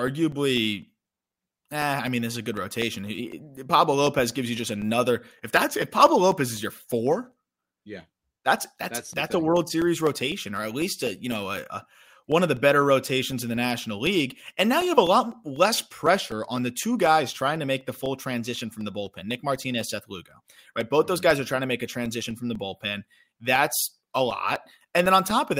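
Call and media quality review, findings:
Regular ticks through the speech, every 0.25 s from 0.07 s to 25.31 s. Periodic USB or driver dropouts. A background task stalls the bus or driver. Each stall drops a couple of milliseconds, replaced by silence, audible only where speech is present.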